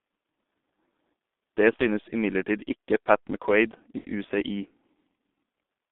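Throughout, G.723.1 codec damage confines the speech to 200 Hz–3.6 kHz and leaves it muffled and hoarse with blurred consonants, rougher than simple telephone band-limiting. At 1.76–1.81 s and 3.98–4.10 s, VoIP packet loss concealed by the speech codec smears the sound into a fading buzz or coloured noise rather than a silent dropout.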